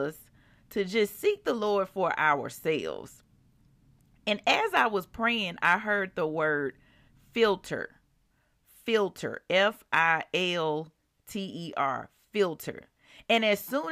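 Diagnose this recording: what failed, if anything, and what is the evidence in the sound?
Nothing in this speech recording points to a failure at any stage of the chain, so there's nothing here to diagnose.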